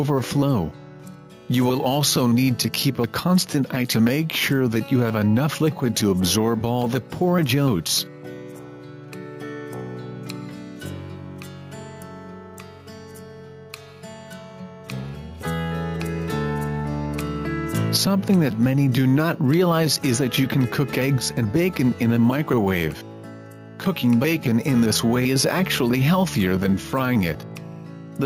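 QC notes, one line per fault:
Throughout: gain pumping. The level keeps ducking under each loud sound and climbing back in the gaps, swinging by around 10 dB. That breathing is a fast limiter or compressor clamping down on the loud moments and releasing straight after, most likely because the input gain was set far too high for the microphone. The result is a squashed sound, with loud and soft parts pushed closer together than they should be.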